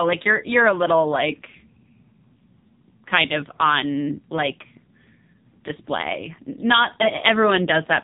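Throughout the speech, the signal has passed through the AMR narrowband mobile codec at a low bit rate; the heavy damage fits roughly 5.9 kbps. Nothing above 3.8 kHz survives, leaving a muffled, telephone-band voice with a buzzy, synthetic edge from sparse pulse modelling.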